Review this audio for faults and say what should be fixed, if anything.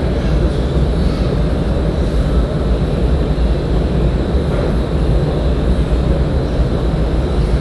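Dolby Digital compression, throughout: the sound is dull, with nothing above 11.4 kHz and a rough, fluttering noise. The likely cause is AC-3 coding at a rate that fits 64 kbps, where the encoder narrowed the band and left many frequency lines to be filled with decoder dither noise. Encode at a higher bitrate, or deliver from a lossless master.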